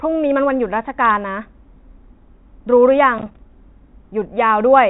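From 3.18 to 3.39 s, processor overload crackle: missed deadlines on buffers of around 5 ms leave a rapid train of silent gaps, gritty tearing rather than one clean dropout.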